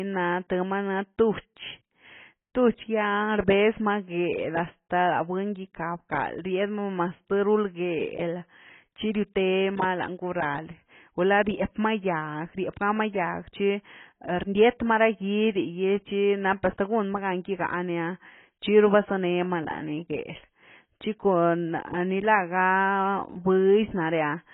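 From start to end, the speech is dull and smeared. Nothing is heard above 3.8 kHz. Sibilants turn fizzy, and sustained sounds warble. This points to heavy AAC compression, likely AAC-LC at a very low bitrate near 16 kbps, which quantises coarsely and leaves spectral holes.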